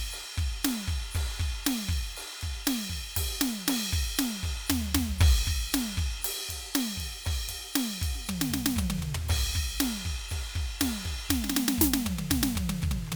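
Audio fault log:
No fault is logged for this music.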